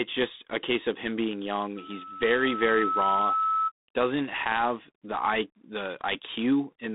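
From the start the whole clip has that G.726 ADPCM character. The speech stops dead around 3.8 kHz and carries a rough, rasping hiss that rises and falls with its level. The coarse sample-to-sample prediction error suggests the 24 kbit/s mode.

At 1.76 s a loudspeaker feedback squeal starts: the microphone is hearing its own loudspeaker, and the loop runs away at 1.3 kHz. It swells over about a second and a half until it's roughly as loud as the speech, then cuts off at 3.72 s.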